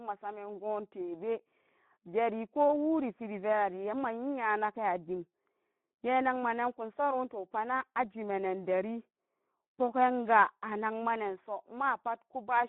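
Speech run through the Speex codec for its whole length, with plainly audible damage. The voice has the noisy, hoarse texture of a CELP coder starved of excitation bits, which fits a low-quality setting around 11 kbps. The band is confined to roughly telephone width, from 150 Hz up to 3.5 kHz, so there is no content above 4 kHz at all, and the low end below 150 Hz is gone too.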